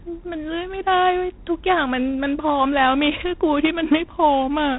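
G.726 ADPCM damage runs throughout the speech, with nothing above 3.9 kHz. Each sample is coded as a coarse difference from an adaptive prediction, and the harsh, rasping hiss that rises and falls with the speech level fits a 24 kbit/s setting.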